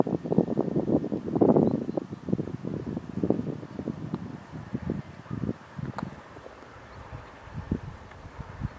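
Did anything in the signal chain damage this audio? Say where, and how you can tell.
No, nothing in the signal chain left an audible mark on this audio. No stage, from the wiring through to playback, shows any sign of having altered the sound.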